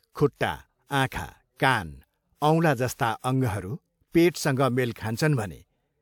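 Speech, with pre-echo before four sharp onsets: about 43 ms of hiss at 0.36 s, 48 ms at 1.07 s, 56 ms at 2.93 s and 33 ms at 4.93 s. A transform codec spread quantisation noise sized for each loud attack across its whole block, filling the silence ahead of it. Unlike reverberation or a real echo, the smear comes before the attack rather than after, and it leaves each onset sounding softened.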